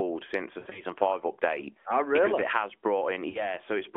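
Right after "since the", from about 0.60 to 0.82 s, you get lost AMR speech frames: about 100 ms gone in patches over 160 ms, the longest run 60 ms. The decoder keeps reusing the last good pitch and vocal-tract settings with dropping gain, so the narrowband sound smears, warbles and sags before recovering roughly at "five update". A shorter drop follows "it has" around 3.30 to 3.56 s, about 40 ms lost, heard as a brief dip and wobble.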